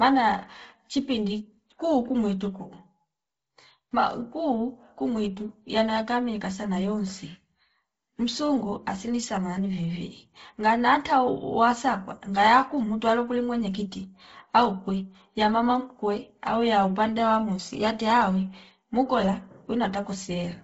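Speech runs through heavy Bluetooth LC3 compression from start to finish, with nothing above 7.8 kHz and a breathy, grainy noise fill in the upper band. The damage points to a bitrate around 24 kbps and 7.5 ms frames, likely from an LE Audio link. Unlike a plain low-pass, the top is filled with noise instead of dropping to silence.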